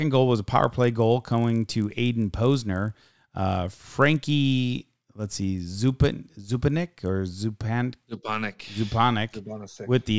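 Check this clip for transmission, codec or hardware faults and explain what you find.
One fault is present: the resampler restarted on every block, from 0.52 s to 7.1 s. The 24 kHz to 16 kHz rate change was done in 20 ms chunks, with each chunk processed in isolation. At every chunk boundary the filter lacked the real neighbouring samples and filled in silence or wrapped data, leaving a small error at each edge. Those errors repeat at 50 Hz, heard as a buzz riding under the speech that disappears in pauses.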